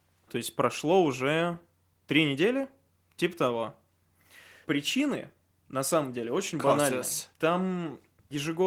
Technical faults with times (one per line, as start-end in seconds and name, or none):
none